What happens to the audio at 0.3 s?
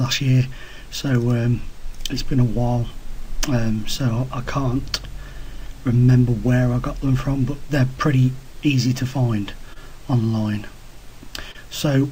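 Right around 0.31 to 0.35 s there's a short stall from a late packet: the jitter buffer ran dry, so the receiver stretched the last bit of sound for about 15 ms until the data showed up, then carried on from the same spot. You hear a brief held moment, with nothing missing. Underneath that, there's clock drift between sender and receiver, with the sender running about 2% slow. The buffer keeps draining and getting patched, which gives small, unevenly spaced timing hiccups that run through the whole clip, including this stretch.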